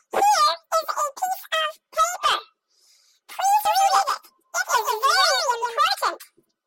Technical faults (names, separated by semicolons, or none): doubled audio track